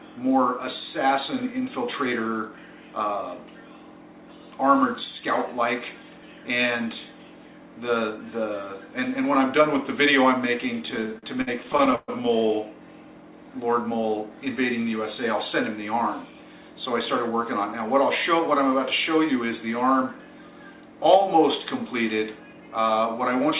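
From 10.86 s to 12.1 s the sound drags and stutters: eighteen brief hitches where it seems to hang and smear before moving on, the longest about 127 ms, filling roughly a third of that stretch. These are repeated stalls (stutter). Packets arrived late, so the jitter buffer kept running dry, and the receiver stretched the last sound, about 360 ms in total, until new audio arrived. Nothing is lost. Throughout, the G.711 mu-law call path leaves nothing above 4 kHz.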